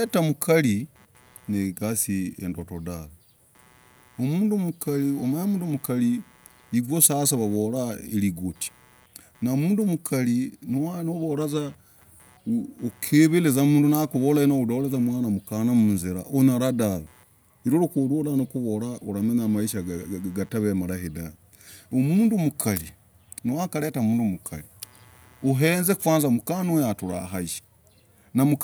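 A faint buzz with a chirping edge sits under the speech from start to finish. This is computer activity noise. Shifting processor or graphics load disturbs the shared ground of the audio circuit. It pulses at around 150 Hz, roughly 40 dB below the speech, and follows the computer's activity rather than the sound.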